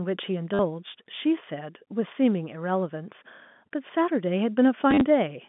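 Speech over a G.711 telephone line, band-limited to about 150 Hz to 3.5 kHz. Packet loss with last packet repeated occurs twice. At 0.54 s, 50 ms is patched by replaying audio, a short robotic stutter. From 4.91 to 5.01 s, 60 ms drops out in scattered bursts, the longest 40 ms. The repeats buzz near 100 Hz, which fits 10 ms packets.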